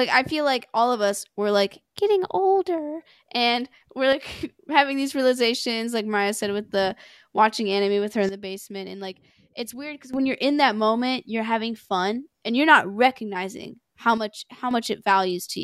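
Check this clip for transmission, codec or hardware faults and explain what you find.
Three sudden gain jumps interrupt the speech, each a step down in level. From 4.13 to 4.41 s, just after "getting older and we're", the level drops by about 6 dB. From 8.29 to 10.14 s, after "anime with her in" and before "when you're in that", it drops by about 12 dB. From 14.18 to 14.71 s, after "you're not recognizing how", it drops by about 6 dB again. Speech and background noise fall and recover together with no fade, likely from a gain setting applied instantly. On the waveform, the envelope shows abrupt rectangular notches. On a spectrogram, these spans appear as uniformly dimmer bands with hard vertical edges.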